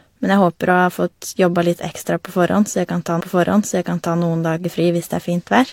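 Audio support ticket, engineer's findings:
Stream segment repeated, 3.16 to 4.14 s. About 0.98 s replays after "jeg kan ta", blip at jump-back. Player queued same segment twice. Resumes at "noen dager".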